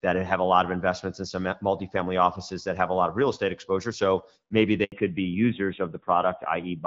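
At 4.84 s the speech cuts out in a handover gap. The call is being passed from one network link to another. During the switch no speech frames arrive. The sound fades out quickly and stays silent for 80 ms. It resumes at 4.92 s once the new link is carrying audio. Whatever was said inside that short hole is simply gone. The break is brief.

From 4.92 s to the end, the call shows a fallback to narrowband. Before this point the speech has the fuller top end of HD Voice, which points to AMR-WB at around 12.65 kbit/s with light coding damage. After the handover, nothing above 4 kHz remains. The voice turns duller and rougher. That sound fits a drop to the older AMR-NB codec at a low rate, around 7.4 kbit/s.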